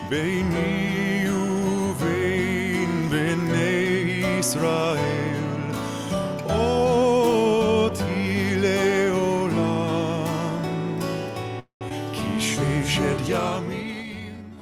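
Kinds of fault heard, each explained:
Call audio freeze: At 11.59 s the sound stalls for about 0.23 s. The last fragment is stretched into a fading buzz or hiss that decays into roughly 100 ms of silence before playback resumes where it left off, adding a 215 ms gap with nothing lost. The likely cause is packets held up in transit, emptying the jitter buffer. On a spectrogram the final spectrum smears horizontally, thins, then blanks out. The waveform shows a shrinking tail and a flat stretch.
Skip ahead: Just after the freeze, at 11.89 s, playback jumps forward. Roughly 150 ms of sound is dropped, and the two sides are stitched together with only a 15 ms bridge, so the timing shortens abruptly instead of pausing. A stretch of audio was dropped while later audio was already waiting. A spectrogram shows a sudden vertical seam where unrelated spectral patterns meet. The waveform shows a discontinuity in envelope and phase.
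Jitter buffer slow-down: From 13.84 s to the end, the sound plays at about 85% speed with pitch unchanged. Sustained parts are drawn out. The buffer was rebuilding its reserve by repeating single pitch periods and pause fragments, which adds 124 ms in total. On a spectrogram, harmonics keep their spacing while events stretch horizontally. The waveform shows near-identical cycles repeated back to back, elongating each segment.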